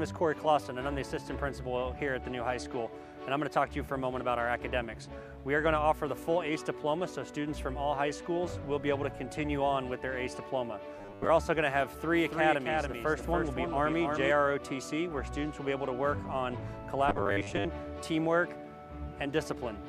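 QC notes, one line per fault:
10.98–11.30 s and 17.09–17.66 s, robotic sound from repeated short buffers: likely late-arriving audio, with the last 10 ms replayed over most of each stretch, giving a rigid, metallic 100 Hz buzz.
12.13–14.31 s, doubled audio track: likely a second, slower capture path mixing in a dry copy about 300 ms late and roughly 5 dB quieter, starting and stopping abruptly.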